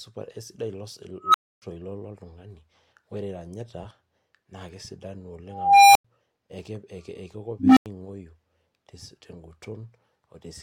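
Speech interrupted three times by a tone that swells into a loud squeal, clips, then drops to brief silence: at 1.21–1.62 s (around 1.5 kHz), 5.47–6.05 s (around 700 Hz) and 7.59–7.86 s (around 300 Hz). This is an unstable filter, a recursive stage whose output grows without limit until it overflows and resets.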